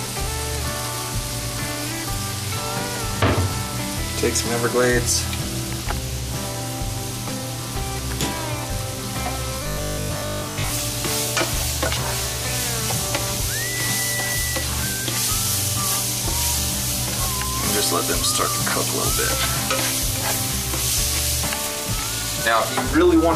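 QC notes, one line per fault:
9.64–10.72 s: robotic sound from repeated short buffers. The sound turns into a rigid, metallic buzz at 50 Hz. New audio likely arrived too seldom, so a 20 ms slice was replayed in its place and most of the real signal was skipped.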